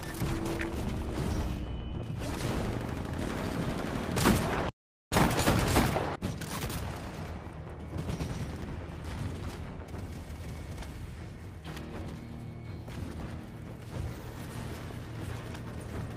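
No technical faults can be heard at any point in the audio.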